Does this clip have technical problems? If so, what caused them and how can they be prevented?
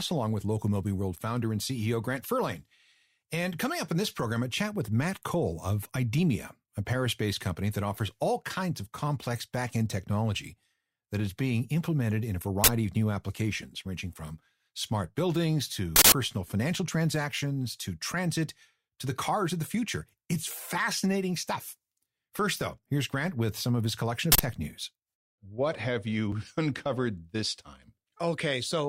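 Yes. Three bursts of an uninitialised buffer come through at 12.64–12.68 s, 15.96–16.12 s and 24.32–24.40 s, lasting 40, 160 and 80 ms. Each time, a block was sent to the output before any audio had been written into it, so stale memory was played as samples. On a waveform each appears as a loud rectangle of hash, and a spectrogram shows a bright broadband column across the whole band. Zero-filling every buffer at allocation, and outputting silence whenever a block isn't ready, prevents this.

A single overlap between stream segments produces a tiny skip at 26.32 s. Two segments' time stamps overlapped, and the player discarded the overlapping stretch even though that audio was not actually duplicated. A few milliseconds of speech vanish and the waveform steps abruptly from one value to another, which a spectrogram shows as a thin vertical line. The segmenting appears to use 6-second chunks. 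Computing segment time stamps from exact sample counts, so boundaries meet without overlapping, prevents this.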